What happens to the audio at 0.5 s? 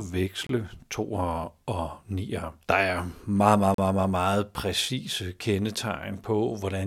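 At about 0.47 s the speech just drops out to dead silence for roughly 27 ms, back by 0.49 s, and resumes right on "to og nier". That's a Bluetooth stall, likely caused by radio interference holding up packets long enough for the headphones' buffer to run empty. Playback freezes until the resent packets land, then carries on, so you get a brief clean gap rather than any crackle or smear.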